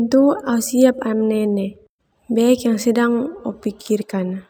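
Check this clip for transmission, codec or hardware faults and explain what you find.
There is one fault, imaging from linear upsampling, present throughout. The rate was raised by straight-line interpolation, which fits a 22 kHz to 44.1 kHz conversion. This dulls the top and leaves mirrored images around 11–22 kHz, about 30 dB down, giving sibilants a faint metallic shimmer.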